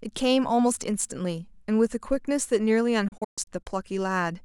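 Right from the start there's sample clock jitter: the converter's clock wobbles by around a microsecond, so samples land a touch early or late. That timing error sits roughly 40 dB under the speech, a faint hiss that thickens on loud, bright sounds and disappears in the pauses.

Then from 3.08 to 3.67 s comes a digital broadcast dropout. The receiver lost good data and muted, with quick 8 ms fades into several holes. About 256 ms goes missing in total, the longest gap 128 ms, which points to a handful of lost frames.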